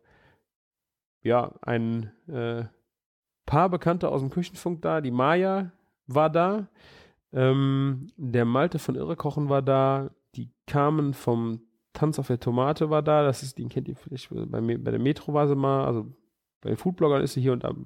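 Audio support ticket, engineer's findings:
No faults found on this speech clip, nothing here that needs chasing.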